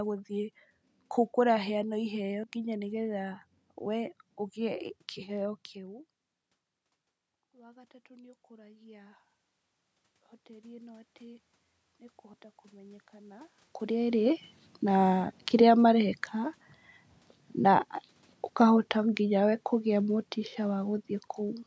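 Audio missing between chunks at 2.44 s: a short skip of roughly 50 ms, with the two sides butted together, likely from a lost piece at a boundary between 5-second chunks.

Automatic gain rising from 7.51 to 9.28 s: after the input dropped about 24 dB, the gain control raised its level about 7 dB, swelling speech and background together.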